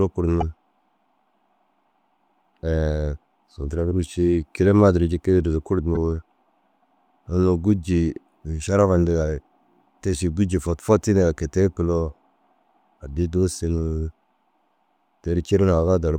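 Frames were likely cut from the MP3 stream, breaking the bit reservoir, so decoding jumps ahead and garbles 24 ms frames into a brief chirp, noise burst or short hole at 0.40–0.43 s and 5.94–5.97 s.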